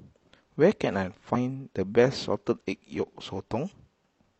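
Damaged data in the compressed stream hits this speech clip from 1.30 to 1.36 s, a roughly 60 ms glitch. Corrupted bytes leave the decoder misreading those frames and losing sync until it finds the next valid frame header, producing a short disruption.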